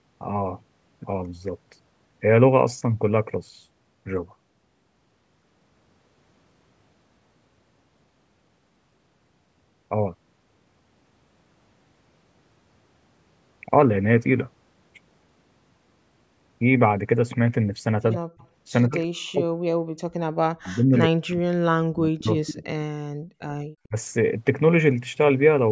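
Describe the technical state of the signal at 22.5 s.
At 22.5 s the speech is most likely caught in double-talk suppression, running from 20.28 to 22.63 s: with both sides talking, the echo canceller could not tell this talker from the loudspeaker echo and pulled the level down, by as much as roughly 40 dB, so the speech dips and breaks up. Overlapping that, an echo leak from 22.46 to 22.54 s likely lets a copy of the speech slip past the canceller, heard 96 ms late and about 15 dB below the speech as a brief ghost.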